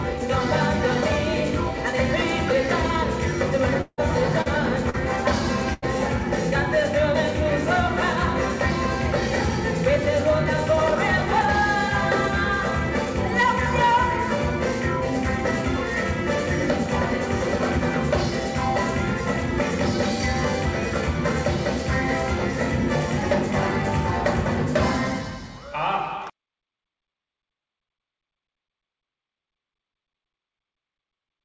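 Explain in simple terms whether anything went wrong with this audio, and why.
From 3.81 to 4.01 s, a long network dropout likely cut off incoming audio; the last sound stretches into a fading buzz or hiss, then briefly goes silent.

At 4.42 to 4.49 s and 4.90 to 4.96 s, short concealed packet loss left small gaps the receiver patched over, each heard as a quick smear or wobble.

From 5.73 to 5.85 s, a burst of packet loss dropped several pieces in a row; the last sound is held and fades, and a short stretch is skipped.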